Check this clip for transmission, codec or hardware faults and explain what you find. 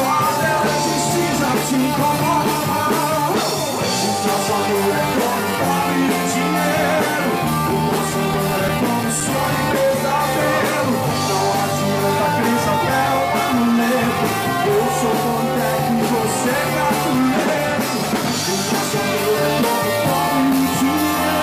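One hardware fault is audible. From 8.00 to 9.89 s come twelve CD scratch ticks, each only a few milliseconds long, spaced about six a second. A blemish defeats error correction once per disc revolution. Unlike random clicks, the ticks repeat at this steady rotational rhythm.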